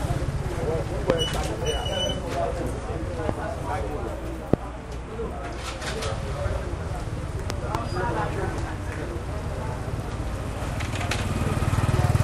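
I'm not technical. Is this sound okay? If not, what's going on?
No. There are loud pops: sudden sharp snaps on top of the sound at 1.10 to 1.12 s, 3.29 to 3.31 s and 4.54 to 4.56 s, and two quick pops between 7.50 and 7.77 s. They're likely brief electrical jolts from a plug, switch, static or a driver glitch.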